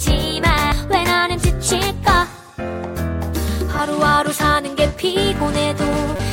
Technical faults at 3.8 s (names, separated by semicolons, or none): damaged data in a compressed stream